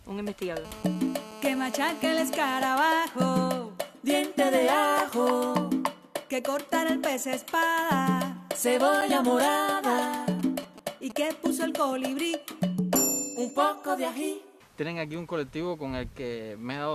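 From 0.65 to 2.64 s a GSM phone buzz sits about 16 dB below the sound: a hard, raspy drone at 217 Hz. A nearby 2G handset in a call is transmitting bursts 217 times a second, and the audio circuitry rectifies each radio pulse. On a spectrogram it appears as a dense comb of horizontal lines at 217 Hz and its many harmonics, running straight through the sound without following it.

Right after, from 2.65 to 3.73 s, the buzz breaks into GSM signalling bursts, around 25 dB down. The phone is still in the call but its user has gone quiet, so it transmits only occasional groups of bursts. These are heard as even ticks with a longer 217 Hz buzz twice a second, and they appear as short stacked harmonic blocks separated by gaps.

At 9.01 s a gap between stream segments leaves a 7.2 ms hole of silence with hard edges. The time stamps of two adjacent segments fail to meet, and the player fills the space with nothing. 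No audio is lost, and the placement fits segments about 6 s long. The waveform drops abruptly to a flat line, and the spectrogram shows a thin vertical blank stripe.

From 10.31 to 11.12 s a second run of GSM signalling bursts appears, around 15 dB below the sound. These are signalling exchanges from a phone outside a call, heard as a galloping dit-dit-dit of short 217 Hz buzzes.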